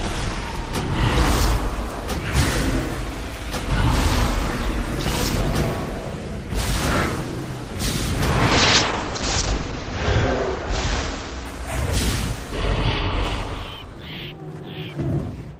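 A call bitrate drop from 8.52 to 11.67 s starves the encoder, consistent with a fall near 8 kbps. Audio turns coarse and muffled, cut above 8 kHz.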